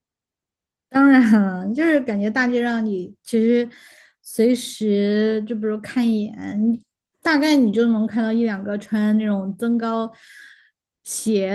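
No technical faults can be heard in this speech recording. The Opus voice compression, working in hybrid mode at 24 kbps with fullband bandwidth and 20 ms frames, leaves only light coding damage on the sound.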